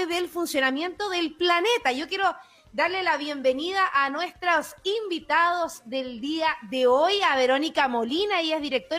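Nothing stood out on listening to this recording.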